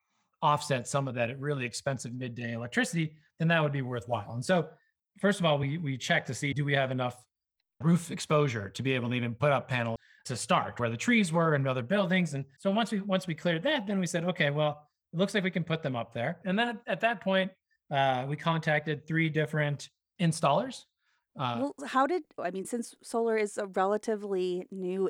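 At 9.96 s there is a CD skip: a brief tick and a dropout of only a few milliseconds, after which the sound resumes from a different point. The laser lost its track and landed on another turn of the disc's spiral, so playback continues out of sequence.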